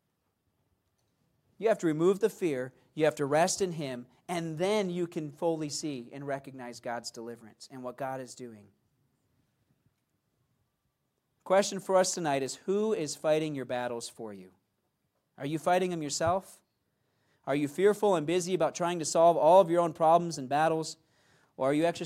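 No technical faults can be heard anywhere in this speech recording. There is nothing in it to point to or time-stamp.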